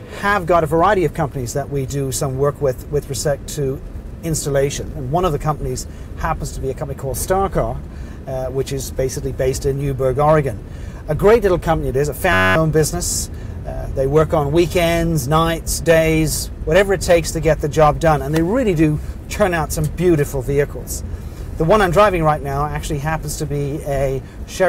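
At 12.33 s to 12.56 s there's a system hang loop. The machine stalled while the sound hardware kept replaying one 10.67 ms chunk, which fits a 512-sample buffer. You hear a steady buzz at 93.8 Hz, and about a fifth of a second of audio goes missing.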